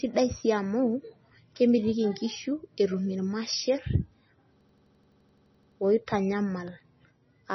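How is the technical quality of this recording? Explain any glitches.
Poor, with two problems: heavy compression damage across the whole recording and a stuttering loop near the end.

Throughout the speech, nothing is present above 5.9 kHz, and the sound is watery and swirly, with smeared consonant attacks. The likely cause is MP3 compression at a low bitrate, around 24 kbps. Starved of bits, the encoder cuts the treble at a fixed frequency and drops weak frequency components, which flicker in and out between frames. On a spectrogram this shows as a hard ceiling at 5.9 kHz, with patchy, blocky energy below it.

From 4.61 to 5.80 s there is a system hang loop. The computer or driver stalled while the audio hardware kept replaying its ring buffer, so one 85.33 ms slice of sound repeats about 14 times. That gives a machine-gun stutter at 11.7 Hz, consistent with a 4096-sample buffer. The waveform shows the same short shape copied end to end, and the spectrogram shows identical vertical stripes repeating. 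Little or no audio appears to be skipped when normal playback resumes.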